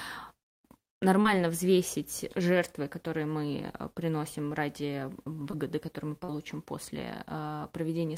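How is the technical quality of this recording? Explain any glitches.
Three brief glitches interrupt the speech, all short concealed packet loss. At 1.21 to 1.27 s, 5.51 to 5.54 s and 6.24 to 6.30 s, between 20 and 40 ms of audio each time arrived too late, and the decoder bridged each gap by extending the preceding sound. The result is a quick smear or wobble. On a spectrogram, harmonics or noise continue briefly without change, and on the waveform there is a repeated cycle that fades back into the real signal.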